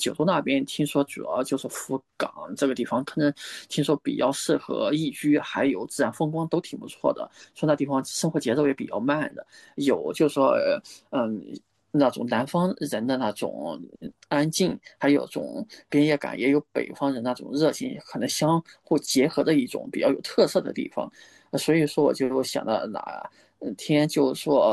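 No technical faults are audible anywhere in this speech recording.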